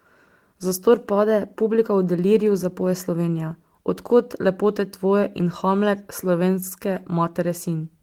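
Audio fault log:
No faults are heard in this speech clip.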